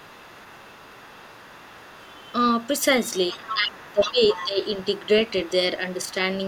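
An echo canceller that likely failed to clear the loudspeaker signal from the microphone lets the other side's voice leak through from 0.0 to 5.52 s, a second, fainter voice about 20 dB below the speech, and again from 5.92 to 6.14 s at about 30 dB down.

With both sides talking, the canceller likely could not tell its own talker from the echo and turned everything down. That speech suppression in double talk makes the speech dip by as much as about 20 dB, for roughly a second in all, between 3.32 and 4.62 s. A shallow dip of about 5 dB follows from 5.97 to 6.18 s.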